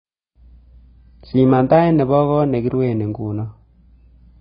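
Speech sounds dull and muffled for the whole clip, with nothing above about 5 kHz, and sibilants and held vowels carry a smeared, warbling, fizzy texture. The likely cause is heavy AAC compression, probably AAC-LC at a very low bitrate, around 16 kbps. At that rate the encoder drops everything above its lowered cut-off and quantises the remaining frequency lines so coarsely that gaps and substitute noise replace real detail.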